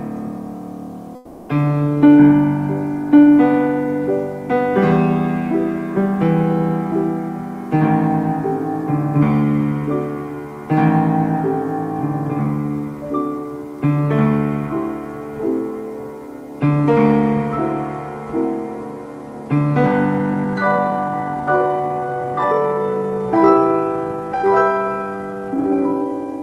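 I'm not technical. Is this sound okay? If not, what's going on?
No. From 1.15 to 1.49 s there's comfort noise in place of the background: a flat, slightly quieter hiss, likely because the sender paused transmission during silence.

From 20.16 s to the end there's a time-stretched section, playing at roughly half speed with the pitch unchanged, so it drags. Likely software stretched it to fit a length.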